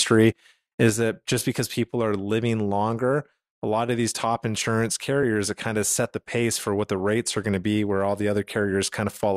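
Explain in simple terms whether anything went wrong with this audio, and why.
At about 0.9 s the speech suddenly drops to a noticeably quieter level, and the background noise drops with it, staying that way to the end. This is a sudden gain jump, likely from a volume setting being changed instantly instead of being eased in gradually.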